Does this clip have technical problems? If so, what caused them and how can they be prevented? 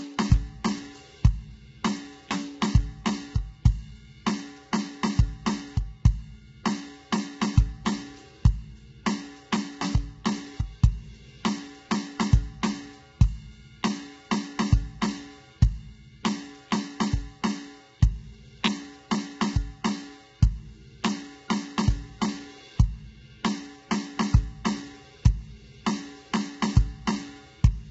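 Yes. Low-delay AAC compression is heard throughout the music: the sound is heavily rough and grainy, noise fills the gaps between harmonics, and nothing is left above 7.8 kHz. The likely cause is AAC-ELD, whose short frames resolve pitch harmonics poorly and here run at a rate that points to about 16 kbps. Giving the codec a higher bitrate, or using standard-delay AAC when latency doesn't matter, prevents it.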